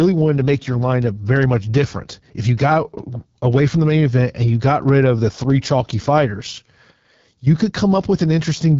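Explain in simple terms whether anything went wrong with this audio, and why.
Throughout, the speech sounds rough and raspy and lacks crisp top end, the mark of the AMR wideband (HD Voice) phone codec squeezed to a low-quality setting.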